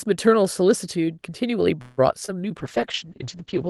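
A speech recording carried over a call path with Opus coding shows three faults. At 1.81 s the sound stalls. The last sound is drawn out as a fading buzz until 1.99 s, about 161 ms. Then the speech resumes where it stopped, with nothing lost, only delayed. This is likely a call audio freeze, where late packets let the jitter buffer run dry and the receiver stretched the last sound until they arrived. From 2.25 to 2.30 s there is a short concealed packet loss. About 20 ms of audio never reached the decoder in time. The receiver filled roughly 25 ms by extending what came before, then blended back into the real signal. The result is a brief smear at that point. From 2.60 s to the end the sound turns rough and muffled. This is a call bitrate drop. It fits the encoder being pushed from around 32 kbps down to around 8 kbps after the bandwidth estimate fell. At that rate the coding grows coarse. 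The top of the spectrum also shrinks, from about 12 kHz to 8 kHz, so the sibilance and crispness above that line disappear. The degraded sound lasts just over a second and does not recover before the clip ends.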